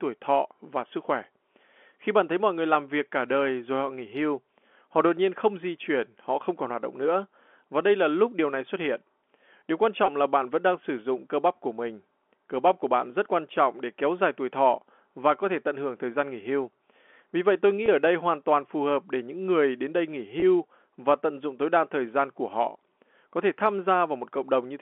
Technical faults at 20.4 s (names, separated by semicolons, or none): packet loss with pitch repetition